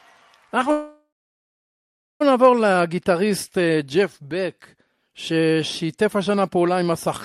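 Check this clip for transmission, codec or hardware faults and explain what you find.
One fault stands out: a call audio freeze from 0.71 to 2.22 s. Delayed packets likely drained the jitter buffer; the last sound fades into 1.14 s of silence, blank on a spectrogram, before the speech resumes intact.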